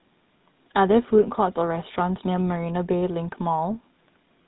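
A GSM full-rate codec has processed this speech from start to finish, its vocal-tract model driven by a sparse, regularly spaced pulse excitation at a rate that fits 13 kbps. Nothing survives above about 3.9 kHz, and the damage is plainly audible as a buzzy, gravelly roughness.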